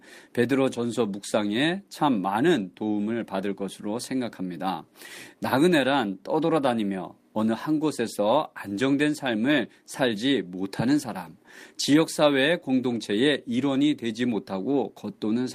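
Speech clip with one lost packet rebuilt from error correction at 8.27 s: a brief rougher, noisier patch where the decoder played a low-bitrate redundant copy instead of leaving a gap.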